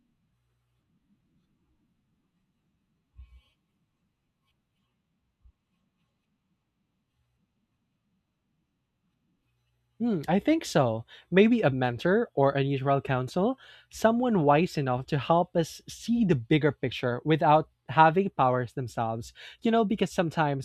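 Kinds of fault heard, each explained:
No faults can be heard in the speech. Nothing in the recording calls for a line of its own.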